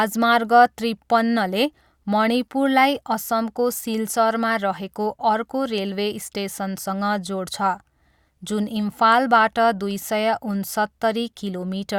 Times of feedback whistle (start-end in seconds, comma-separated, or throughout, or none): none